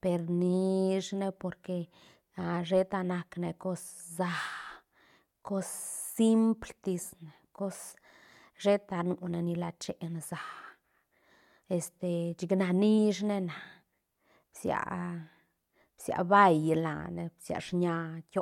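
Listening to the speech in this recording, nothing technical stood out at any point.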